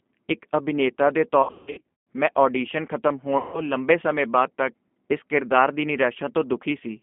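The whole recording passes through the G.729 codec at 8 kbit/s, on a line band of roughly 200 Hz to 3.4 kHz. The damage is plainly audible. Speech is rebuilt from a vocal tract filter, a pitch predictor and a few pulses per frame, so it sounds rough and faintly synthetic. A simple telephone band-limit would only sound muffled.

Between 1.43 and 2.05 s, after "ਇੱਕ ਅਭਿਨੇਤਾ ਦੇ" and before "ਮੈਂ ਆਡੀਸ਼ਨ", VoIP packet loss concealed by the speech codec takes over. About 480 ms of audio is missing, scattered across 640 ms, and the longest unbroken loss is 160 ms. This fits losses of 20 ms packets. The decoder keeps extending the last pitch and filter, so the gaps become smeared buzzy tones that fade out. An ordinary dropout would leave silence or hard clicks instead. From 3.38 to 3.63 s, just before "ਲੰਬੇ ਸਮੇਂ ਬਾਅਦ ਤੱਕ", a second loss of 160 ms is filled in the same way. In both cases the voice stays weak and distorted for a moment after the packets return.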